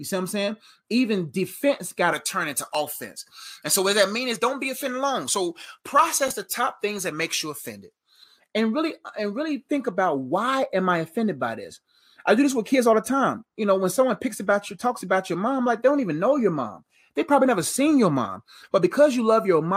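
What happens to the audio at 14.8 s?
Nothing goes wrong at 14.8 s: the speech there plays through intact, with no dropout, click or other fault.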